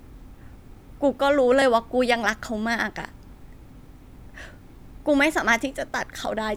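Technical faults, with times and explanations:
0.20–5.85 s, clock drift buffer slips: about five clicks, one every 1.41 s, likely mismatched clocks making the buffer drop or repeat a few dozen samples.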